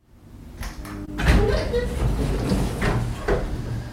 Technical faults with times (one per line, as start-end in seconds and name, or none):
1.05-1.09 short concealed packet loss